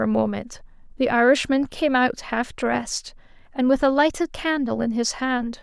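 No technical faults can be heard in this speech recording.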